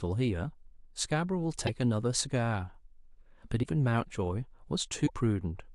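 In this speech recording, the sound jumps forward with a brief garbled glitch at 1.66–1.69 s, 3.62–3.65 s and 5.06–5.10 s. The likely cause is a broken MP3 bit reservoir: after dropped 26.1 ms frames, the next frame reads another frame's bytes.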